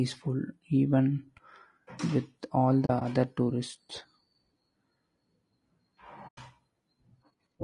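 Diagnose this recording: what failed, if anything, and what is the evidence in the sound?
Codec stage: the speech is rough and grainy throughout, with noise filling the gaps between harmonics. That is plainly audible low-delay AAC compression. It sounds likely to be AAC-ELD running at something near 32 kbps.

Codec or network stage: there is AAC frame loss with muting. Right after "with all", from 2.85 to 3.02 s, the sound drops out in patches totalling 60 ms, the longest being a few tens of ms. A cleaner 100 ms hole follows at 6.27 to 6.38 s. The decoder zeroed the missing frames, and the overlapping windows fade each hole in and out.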